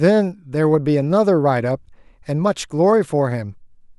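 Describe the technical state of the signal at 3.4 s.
At 3.4 s the speech signal is intact, with no audible technical fault at that moment.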